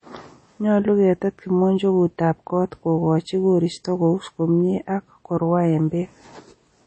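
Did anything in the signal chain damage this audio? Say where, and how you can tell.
Yes. The damage sits at the codec stage, most likely MP3 compression at a low bitrate. The speech has nothing above 8.3 kHz from start to finish, a hard treble ceiling typical of a starved encoder, and the codec damage is plainly audible: a watery, swirling texture with chirpy s sounds and softened consonant attacks. The encoder ran short of bits, dropped the top band and zeroed weak frequency lines that flicker between frames, which fits roughly 32 kbps.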